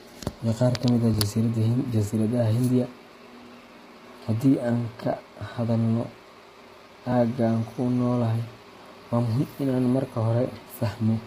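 Throughout, the speech sounds rough and grainy, with noise filling the gaps between harmonics. This is heavy low-delay AAC compression, likely AAC-ELD at a bitrate that fits about 24 kbps.

At 1.14, 3.14, 5.13, 7.12 and 9.12 s, audio goes missing between chunks. A few milliseconds skip out and the two sides butt together, likely lost as a recorder switched chunks every 2 s.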